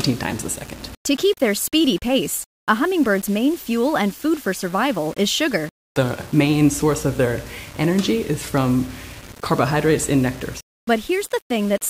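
From start to finish the audio carries a grainy, signal-dependent distortion, the signature of low bit depth without dither. The likely cause is requantisation to about 6 bits by plain rounding, leaving only coarse amplitude steps. Because no dither decorrelates the rounding error, that error tracks the waveform, sitting roughly 25 dB below the signal. Quiet passages turn gritty, and the faintest material sputters between adjacent steps or drops out to silence.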